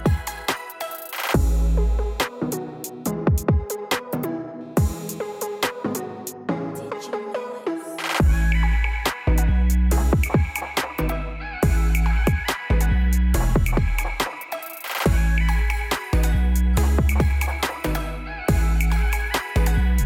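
No technical faults can be heard anywhere in this audio. There is nothing in the signal path that calls for comment.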